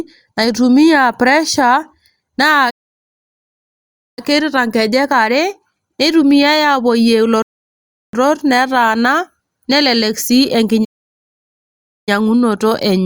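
At 2.70 s the speech cuts to silence until 4.19 s, a playback stall of about 1.47 s. The player likely ran dry or was blocked. At 7.42 s a rebuffering stall halts the speech for 0.71 s. It resumes at 8.13 s exactly where it stopped, adding time. A second playback stall silences the speech from 10.84 to 12.09 s, about 1.23 s.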